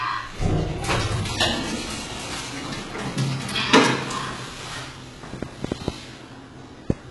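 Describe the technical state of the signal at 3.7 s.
At 3.7 s the signal carries the same damage as the rest of the clip, most likely from HE-AAC compression. Only the lower spectrum is coded directly, and the treble is rebuilt by copying lower bands upward under a coarse envelope, so its harmonics do not line up with the bands below. The top end sounds gritty and metallic. The artefacts are heavy, with nothing above 11.5 kHz, which fits a very low bitrate of around 12 kbps.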